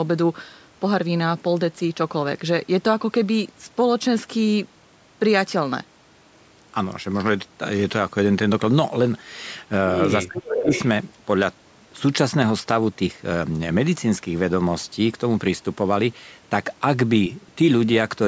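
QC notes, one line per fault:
10.26–10.72 s, speech suppressed in double talk: the echo canceller likely mistook simultaneous talk on both sides for its own loudspeaker echo and clamped the near voice, so the speech dips by roughly 20 dB over about 400 ms while the far side talks.
10.35–10.87 s, echo leak: the loudspeaker side's echo canceller likely failed to remove all of its loudspeaker pickup, so a copy of the voice returns 438 ms late at about 5 dB below the speech, overlapping the suppressed stretch as a delayed, secondary repeat.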